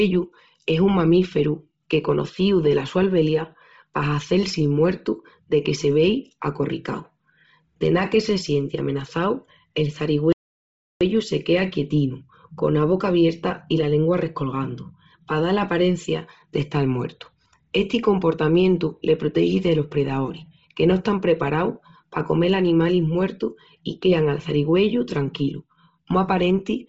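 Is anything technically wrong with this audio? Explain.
Yes, there are two faults in this speech recording.

Throughout the clip, the sound likely passed through Bluetooth LC3 compression at a low rate. The encoder throws away most of the upper spectrum and fills the gaps with synthetic noise, and nothing survives above 7.7 kHz. The damage is heavy. Consonants and vowels carry a breathy, grainy fringe, and the top end is dull and capped, which fits a budget around 24 kbps with 7.5 ms frames.

From 10.32 to 11.01 s, a playback stall cuts the speech off mid-flow for about 0.68 s. The output likely ran dry because the player was starved of data or its thread was held up. Nothing plays until it recovers, so the sound drops abruptly to silence for a clearly noticeable gap and then resumes.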